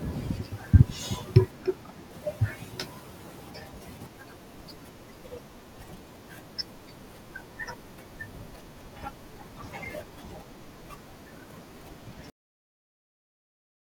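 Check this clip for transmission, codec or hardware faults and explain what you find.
There's one fault here, a cut-off end. At 12.30 s the speech stops dead mid-sound and drops straight to digital silence for the remaining 1.6 s. No decay, no tail. The final buffers never got written out or played, so the recording just truncates there.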